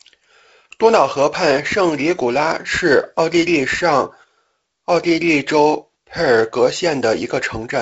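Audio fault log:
No faults are present in this speech clip. The sound reaches no higher than about 7.7 kHz, with the light coding hiss expected of G.722 wideband telephone coding, which fits the 48 kbit/s mode.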